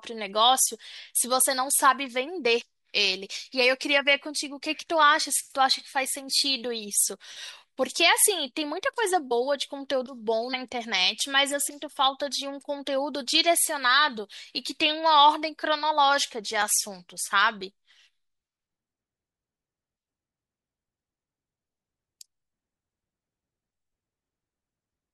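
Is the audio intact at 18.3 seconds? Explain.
No. At 18.3 seconds the speech sits inside a run of periodic USB or driver dropouts from 16.62 to 20.61 s. Roughly once a second, the audio path stalls and about a millisecond is skipped. Each gap sounds like a regular tick.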